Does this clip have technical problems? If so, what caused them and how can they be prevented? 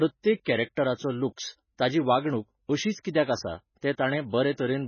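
Yes. Heavy MP3 compression damage runs through the whole clip of speech: nothing is left above 6.5 kHz, and the remaining sound has a watery, swirling texture. This is likely from MP3 encoding at a very low bitrate, around 16 kbps. Starved of bits, the encoder drops quieter frequency components, which flicker on and off between frames, and it cuts the treble outright. To prevent this, encode at a much higher bitrate or keep an uncompressed master.

Pre-echo occurs at 0.44, 0.75, 1.36, 3.03 and 3.81 s. At 3.03 s it comes just before "कित्याक आसा", and at 3.81 s just after "अशीच कित्याक आसा". Each time, a brief hiss of 11 to 19 ms leads into a sharp onset, which sounds softened. The codec spreads the noise meant for the loud attack across its whole block, so the noise also fills the quiet gap ahead of it. Higher bitrates and an encoder that switches to short blocks on transients prevent it.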